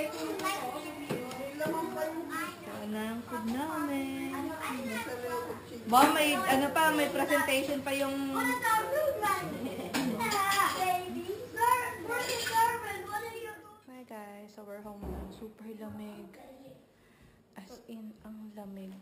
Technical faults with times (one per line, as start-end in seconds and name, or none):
0.00-19.02 imaging from sample-and-hold upsampling